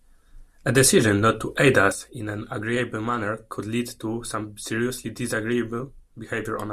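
A sudden gain jump at 1.92 s, right after "decision not to aid", drops the speech and its background noise together by about 9 dB for the rest of the clip. A digital gain change was likely applied between adjacent samples with no ramp.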